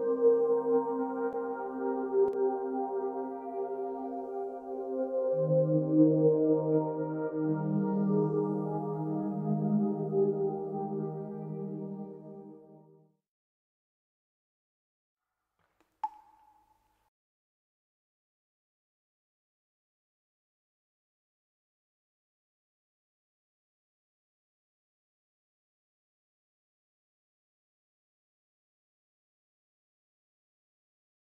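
At 2.28 to 2.33 s there's a brief 50 ms dip where the sound falls by about 6 dB and snaps straight back. That's most likely one channel dropping out: with one stereo side gone, the mono sum loses half its shared content for that instant.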